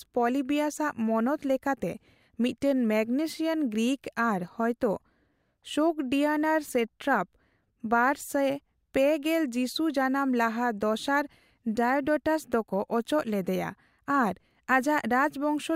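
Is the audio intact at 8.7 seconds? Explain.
No, 8.7 s sits inside a run of clock slip clicks from 0.30 s to the end: faint ticks about five times a second, likely from two unsynchronised clocks dropping or repeating single samples.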